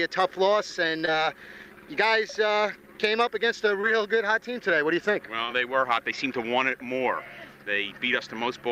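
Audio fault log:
1.05–1.09 s, 3.81–3.85 s, 5.45–5.50 s: short concealed packet loss. Each time, 20 ms of audio arrived too late. The receiver extended the preceding sound to cover it, leaving a brief smear or wobble.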